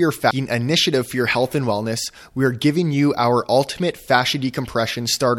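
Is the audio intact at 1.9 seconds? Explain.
Yes, the audio is intact at 1.9 seconds, with no dropout, click or other fault at that moment.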